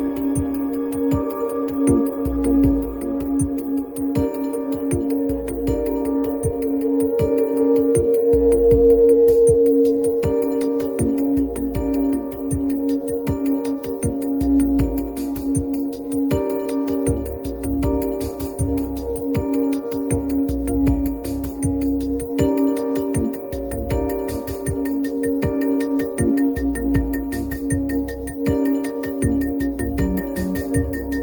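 No technical faults can be heard anywhere in the audio; the signal stays steady and intact throughout.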